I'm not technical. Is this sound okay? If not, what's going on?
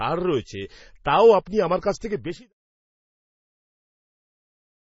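No. The speech has heavy damage of the kind MP3 compression causes, likely from being squeezed into a small file. It sounds watery and swirly throughout. S sounds turn metallic and chirpy, and the starts of sounds smear. The encoder threw away quiet details to save space, so bits of sound flicker in and out. It also cut off all the crisp treble above about 7.6 kHz. The smooth fade out from around 2 seconds to 2.53 seconds is a normal edit.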